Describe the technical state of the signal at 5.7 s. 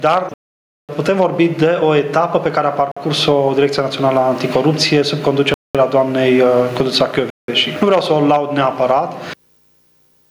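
At 5.7 s the sound has dropped out completely. The silence runs from 5.54 s to 5.75 s, about 0.21 s, and then the audio resumes. This is a Bluetooth stall. The likely cause is radio interference delaying packets on the wireless link. The headphones' playback buffer emptied before the resent packets came through, so output halted for that gap instead of stuttering or blending across it.

Around this moment the gain also swings by somewhere around 15 dB. Loud and soft passages sit unnaturally close in level and the whole signal sounds squashed. This is gain pumping, likely from input gain set far too high for the microphone, with a fast limiter or compressor clamping down on every peak and releasing in the gaps.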